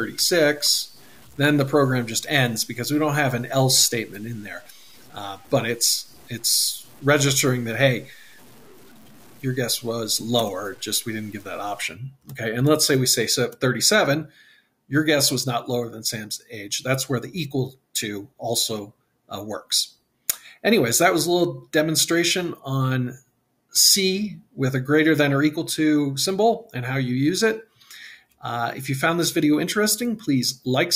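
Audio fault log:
0.0–11.8 s, low bit depth without dither: grainy distortion sits roughly 30 dB below the sound and moves with it, unlike a steady noise floor. This is likely coarse rounding down without dither, which fits truncation to 8 bits.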